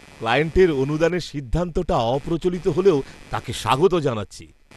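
From start to finish, a buzzy, chirping scratch sits under the speech, pulsing at roughly 150 Hz and about 25 dB below the voice. It rises and falls with no relation to what is being said. That is computer activity noise. As the processor, graphics card or mouse draws varying current, the shared ground of the audio circuit shifts, and those load swings leak into the recording as an audible rhythm.

Also throughout, the speech sounds dull and gurgling, with a grainy, watery texture. Everything above 12.2 kHz is missing, and the upper detail seems to flicker in and out. This is plainly audible damage and points to MP2 compression as the likely cause. That codec divides the signal into 32 sub-bands and shares out bits among them. At a rate that fits around 80 kbps, the upper bands get switched off and the remaining ones are coarsely quantised.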